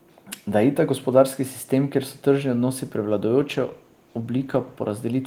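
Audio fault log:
3.41–4.99 s, call bitrate drop: the speech turns rough and watery, with the top end dulled. The sound fits the encoder being pushed from around 32 kbps down to about 15 kbps, holding the lowest rate for roughly 1.5 s, so it codes more coarsely and trims the high frequencies. Unlike packet loss, there are no gaps or robotic repeats, and unlike a fixed low-pass filter, the graininess itself lifts once the rate recovers.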